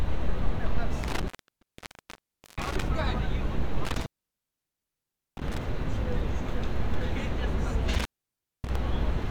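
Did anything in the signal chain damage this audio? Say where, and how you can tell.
Yes. An intermittent contact in the analogue wiring breaks the audio three times, around 1.03–2.83 s, 3.85–5.58 s and 7.94–8.76 s, with the line open for about 1.29, 1.31 and 0.59 s. A loose plug or cable momentarily disconnects the signal. Each dropout shows crackle spikes at its edges, then a near-flat waveform and a blank spectrogram band holding only faint hiss.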